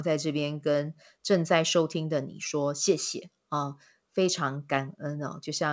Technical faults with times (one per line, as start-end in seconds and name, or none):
none